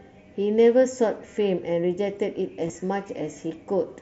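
Between 2.67 and 2.75 s, concealed Bluetooth headset packet loss: voice packets between the headset and phone were dropped, 37.5 ms in total spread over 75 ms, none longer than 15 ms. The receiver refilled each gap with repeated recent waveform, leaving a brief buzzy flutter.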